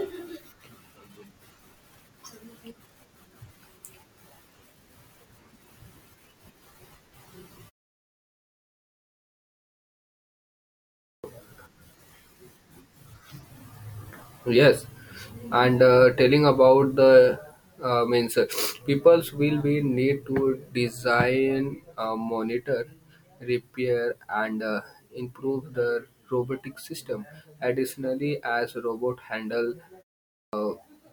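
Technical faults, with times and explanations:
10.95 to 11.24 s and 30.26 to 30.53 s, clipped start after a pause: speech bursts in abruptly from silence with its opening sounds missing, about 0.29 s lost the first time and 0.27 s the second. The output device drops into a low-power state during quiet stretches and needs a moment to wake and resync, so whatever arrives first is swallowed. It happens after a 3.33 s gap and again after only 0.31 s, which shows how readily the device idles.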